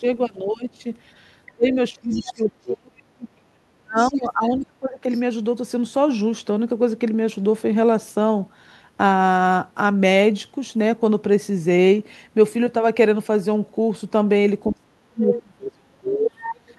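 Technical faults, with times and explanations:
0.0–0.85 s, 1.55–5.1 s, 14.69–16.78 s, speech suppressed in double talk: the talker's level sinks by about 20 dB at first, later about 35 dB, likely because the echo canceller ducked everything while both sides spoke. Waveforms show collapsed, gappy envelopes; spectrograms lose upper harmonics.
1.07–2.75 s, 3.98–5.21 s, 15.34 s, 16.4–16.74 s, other side's voice leaking through: a second voice sits roughly 10–20 dB under the talker, likely residual loudspeaker echo the canceller missed. Spectrograms show faint harmonic traces unrelated to the main voice.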